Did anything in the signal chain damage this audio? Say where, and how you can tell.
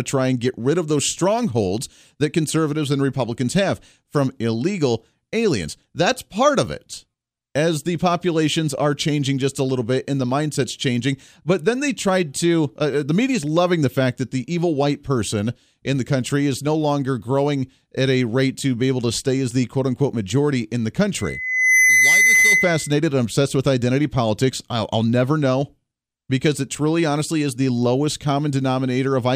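Yes. From 21.17 to 22.97 s a loudspeaker feedback squeal appears: a steady 2 kHz tone swells over under a second to roughly 5 dB above the speech. This is an acoustic loop in the analogue stage, where a microphone hears its own loudspeaker and loop gain exceeds one at 2 kHz.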